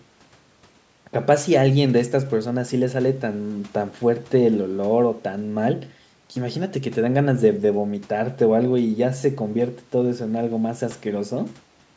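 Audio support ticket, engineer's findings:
No fault found: speech shows normal call microphone processing, band-limited to 8 kHz with the lowest bass removed by its high-pass filter.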